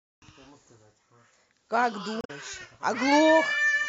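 A short speech clip with one problem: from about 2.21 to 2.31 s, roughly a tenth of a second, there's a short glitch that comes from damaged data in the compressed stream. Some bytes in that stretch were lost or scrambled, so the decoder couldn't make sense of those frames, lost its sync and had to hunt for the next valid frame header before clean audio picked up again.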